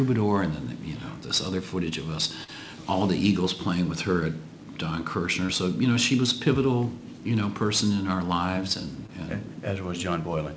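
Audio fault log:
2.44–2.50 s, 5.46–5.50 s, 9.06–9.10 s: short concealed packet loss. About 40 ms, then 20 ms, then 20 ms of audio arrived too late to decode, so the receiver extended the preceding sound and blended back in, leaving a brief smear or wobble at each point.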